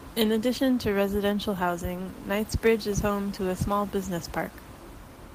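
No technical faults are present in the speech; the only thing under it is the room's own background noise, sitting about 22 dB below the voice level as part of the original recording.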